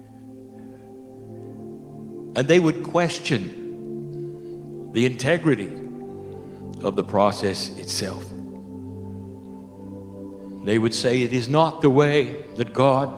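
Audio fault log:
No technical fault can be heard anywhere in the audio, and the signal holds steady in level and continuity throughout.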